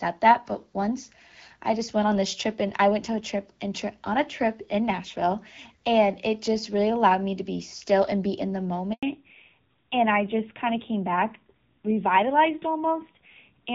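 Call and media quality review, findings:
Handover gap at 8.93 s, right after "and be in the". Sound dies out and stays silent for 100 ms, then resumes. Probable component: network handover. No speech frames arrived during the switch. Audio in that stretch is lost.

Fallback to narrowband from 9.03 s to the end. Nothing above 4 kHz. Duller, rougher tone. Before it, fuller band fits AMR-WB near 12.65 kbit/s. Probable component: codec switch at handover to AMR-NB. Roughness fits roughly 7.4 kbit/s.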